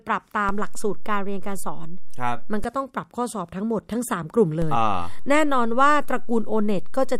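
A DC step shifts the waveform's zero line by about -19 dBFS at 0.49 s and returns at 2.64 s. A second identical step at 4.62 s holds to the end. Each jump lands as a low thump, while the speech continues unchanged.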